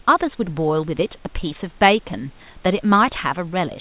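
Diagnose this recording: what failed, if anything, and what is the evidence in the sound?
Nothing has failed here: the speech comes through the call path's G.711 A-law coding at 64 kbps with nothing above 4 kHz, just as that narrowband codec would give, and the room noise sits about 38 dB below the speech as part of the space the microphone was in.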